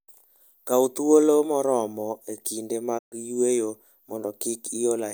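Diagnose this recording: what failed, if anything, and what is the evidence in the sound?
The failure is a digital broadcast dropout at the reception and decoding stage. Just after "thuolo moromo e kinde", the speech fades to silence over about 20 ms at 2.97 s. It returns at 3.14 s. The receiver muted on bad frames. The 128 ms gap fits four lost frames.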